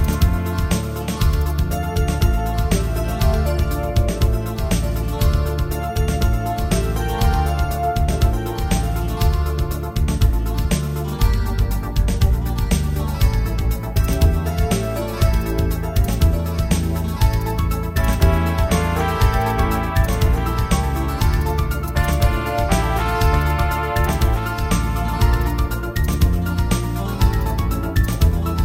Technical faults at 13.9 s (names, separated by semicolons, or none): doubled audio track